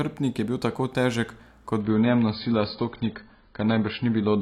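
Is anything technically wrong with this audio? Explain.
Yes. From 1.81 s, just after "je bil tako težek", to the end, an adaptive stream switches to a lower bitrate. The treble vanishes above 5.1 kHz and artefacts swirl, which fits a drop from 96 to 16 kbit/s AAC. A spectrogram shows a sudden, gapless ceiling.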